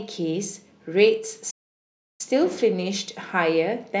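The player likely ran dry of buffered data or had its output thread blocked at 1.50 s, causing a playback stall: the speech cuts off abruptly mid-flow and the output stays silent for about 688 ms, until 2.21 s, when the sound resumes.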